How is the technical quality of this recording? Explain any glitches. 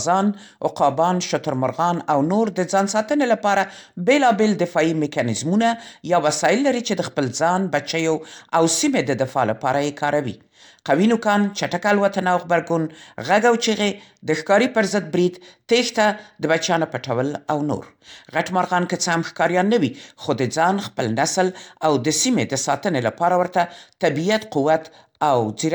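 Nothing technical trips up this speech recording; there are no glitches to explain.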